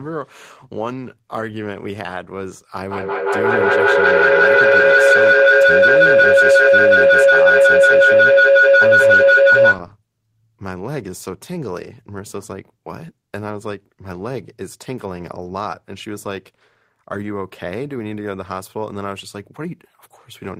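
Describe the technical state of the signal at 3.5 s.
At 3.5 s a feedback howl is building, running from 2.90 to 9.89 s. The room loop regains level each pass, narrowing to a tone around 500 Hz with a loop delay of roughly 150 ms, peaking about 15 dB above speech. A spectrogram shows a bright horizontal band; the waveform swells into a dense envelope.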